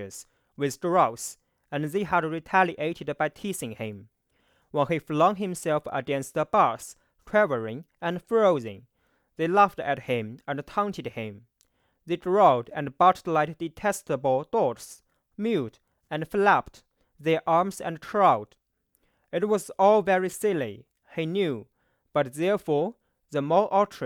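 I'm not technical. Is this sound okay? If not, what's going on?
Yes, this speech recording sounds fine, with nothing going wrong anywhere in it that you'd need to worry about.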